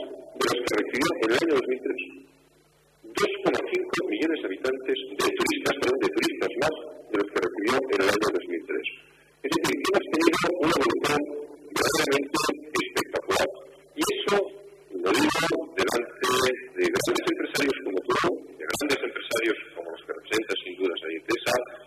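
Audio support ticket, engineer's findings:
No faults found on listening; nothing to attribute to any component. No path-specific observations to add.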